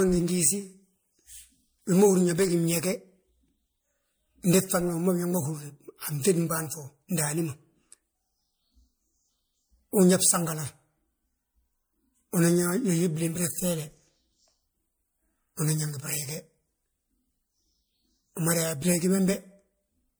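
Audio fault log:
throughout generation loss: The speech has a swirly, smeared, hollow character with softened consonant attacks, more damage than a single pass at a bitrate around 96 kbit/s would cause. The likely cause is MP3 encoding repeated about four times, each pass quantising again on a shifted frame grid so noise and spectral gaps pile up. Nothing extends above about 21 kHz.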